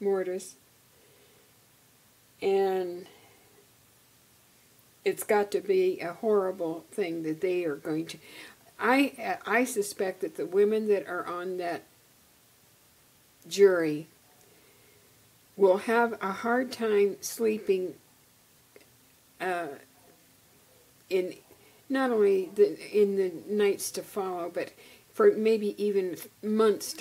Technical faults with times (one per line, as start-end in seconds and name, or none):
none